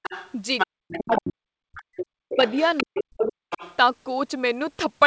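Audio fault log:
0.03–1.3 s and 1.76–3.76 s, other side's voice leaking through: a second voice sits under the talker, about 10 dB down at first, then about 15 dB down, likely loudspeaker echo the canceller left in. A spectrogram shows a faint second set of harmonics.
0.66–2.38 s and 2.83–3.42 s, speech suppressed in double talk: the talker's voice drops by roughly 40 dB in pieces while the far side is active, for about 1.5 s and then half a second. This is likely the canceller muting both voices together. The waveform shows the envelope collapsing abruptly.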